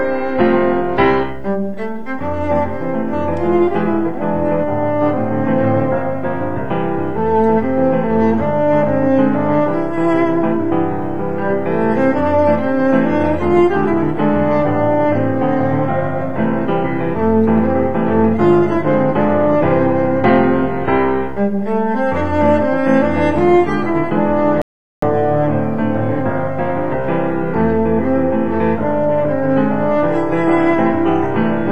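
At about 24.62 s the audio drops into silence for roughly 0.4 s, then picks back up at 25.03 s exactly where it left off. That's a rebuffering stall: the player ran dry of downloaded data and simply waited for more to arrive. Nothing gets skipped or repeated, so there's no jump in the material, just an extra 407 ms of dead air wedged into the timeline before playback carries on.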